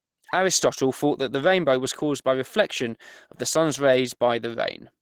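From start to finish the speech carries plainly audible Opus compression damage, likely from a low-rate encode. It sounds hoarse, a bit muffled and grainy despite the top end reaching 20.2 kHz, which fits the hybrid speech mode at around 16 kbps.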